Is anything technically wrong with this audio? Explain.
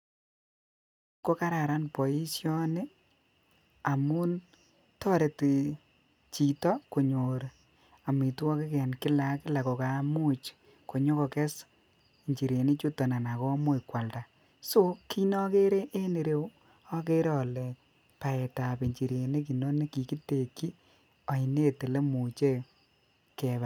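No, nothing in this speech recording points to a technical problem. The level fades in smoothly over roughly the first quarter second, from about 1 s to 1.25 s, with no click or hard edge, as an editor would shape it.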